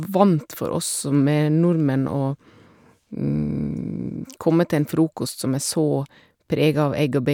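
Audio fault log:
No faults are audible in the speech; the level holds steady and the signal runs without dropouts, distortion or interruption.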